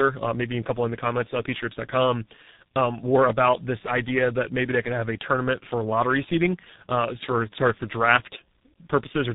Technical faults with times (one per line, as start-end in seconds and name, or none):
0.00-9.34 tandem speech coding